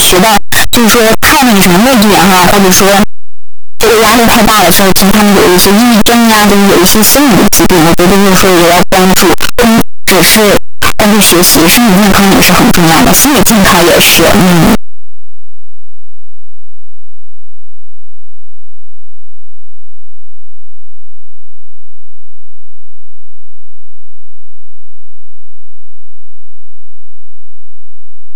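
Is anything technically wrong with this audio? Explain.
Yes. Throughout the speech, the sound is a very loud, harsh distortion with even quiet passages as loud as the rest, which points to a likely signed and unsigned mixup on 8-bit samples. Flipping the top bit turns every zero crossing into a full-range jump. Ordinary 8-bit grain sits far below the signal instead.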